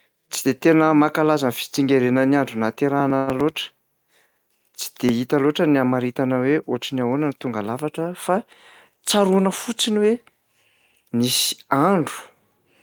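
From 3.00 to 5.09 s the speech carries a regular ticking, one tick every 0.099 s, about twenty in all. These are periodic USB or driver dropouts: a background task stalls the audio path at a fixed interval and roughly a millisecond is skipped each time.

Inside that stretch, between 3.17 and 3.32 s, a sound is held too long, with a slight buzz or dip. This is a short stall from a late packet: the jitter buffer ran dry, the receiver stretched the last sound by 97 ms, then resumed where it left off, losing nothing.

From 8.90 to 9.48 s the speech sounds hurried while its pitch stays the same, running at about 109% speed. This is a jitter buffer speed-up: with more audio queued than its target, the receiver trimmed short pitch-period pieces repeatedly, about 50 ms in total.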